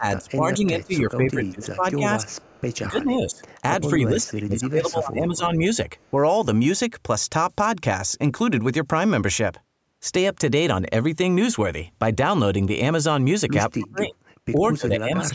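A call echo canceller, likely confused by both sides talking at once, caused speech suppressed in double talk in this speech recording. It turns the talker down by as much as about 30 dB, with dips and cut-outs at 0.00–2.36 s, 2.90–5.43 s, briefly at 6.11–6.18 s, and 13.76–15.35 s. The same canceller also likely failed to remove all of the loudspeaker pickup, producing echo leak. A faint copy of the voice, delayed by 263 ms and far quieter than the speech, returns at 2.28–2.77 s, 3.34–3.49 s and 6.00–6.10 s.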